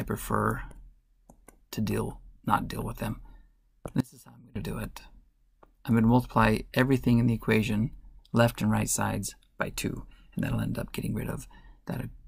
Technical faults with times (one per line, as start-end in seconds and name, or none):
4.01-4.56 audio dropout to a faint residue